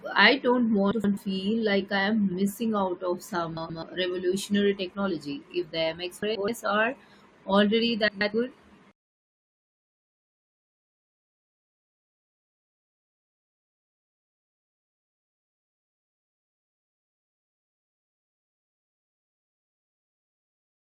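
Two adjacent runs of frames were decoded in swapped order, frames out of order, at 0.91–1.17 s, 3.57–3.83 s, 6.22–6.48 s and 8.08–8.34 s. Each swap exchanges two 128 ms blocks, which fits runs of four frames. The speech briefly jumbles into a garbled flutter, and no time is lost.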